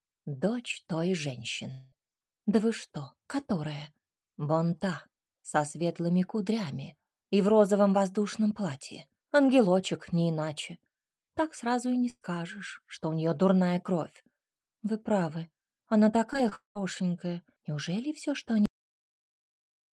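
At 1.71 s the sound gets stretched into a buzzy continuation that fades over about 200 ms until it picks up again at 1.94 s with that stretch gone. It's likely a long network dropout, with the receiver papering over roughly 200 ms that never arrived.

Around 12.10 to 12.23 s there's a burst of packet loss. About 120 ms goes missing, the last sound is carried on and turned down, and the final 40 ms or so drops to silence before the audio resumes further along.

Between 16.33 and 16.80 s there's repeated packet loss, and it sounds robotic and choppy. There are five gaps in under half a second, the longest about 200 ms, so more than half of that span is patched-over continuation rather than real audio.

Then there's a cut-off end at 18.66 s. The sound stops dead mid-stream and falls straight to digital silence with no decay, because the last buffers never got played. The top end throughout sits around 12 kHz, which fits a call codec running at a modest bitrate.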